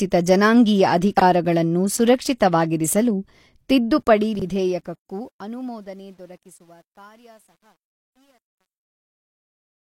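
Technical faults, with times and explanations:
1.17–1.22 s and 4.35–4.42 s, chunks out of order: a 21.33 ms block plays one chunk late at 1.17 s and two chunks late at 4.35 s, so a short stretch sounds jumbled, with three hard joins at each event where the waveform jumps.
3.95 s to the end, truncation distortion on a fade: the fade-out is quantised without dither, which points to a stage keeping about 10 bits. As the level falls, the waveform collapses into coarse steps, and the sound turns gritty, worst from 5.63 s to the end.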